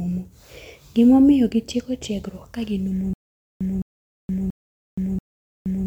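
From 3.14 s to the end, the speech turns into a stutter with silent gaps. A 0.21 s fragment repeats four times, each followed by about 0.47 s of digital silence, so the pattern recurs every 0.68 s. The likely cause is a stalled player or stream replaying its last buffered fragment at each retry and then running empty. Unlike a single dropout or a rapid glitch loop, the repeats keep an even rhythm with dead-quiet gaps, and the speech that should follow never arrives.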